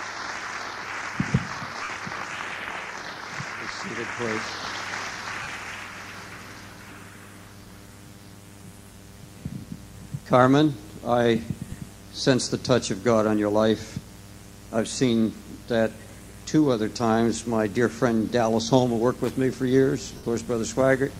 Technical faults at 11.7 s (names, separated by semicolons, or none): lost LE Audio frames